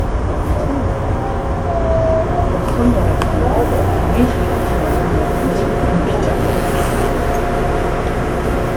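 Throughout the clip the sound has a swirly, hollow quality, with transients that smear instead of snapping cleanly, and the top end stops at about 20.1 kHz. That points to generation loss. The audio was likely decoded and re-encoded around four times with a WMA-style codec at a rate that fits 128 kbit/s. Each pass requantised on a shifted frame grid, so the small errors accumulated beyond what one encode at that rate would leave.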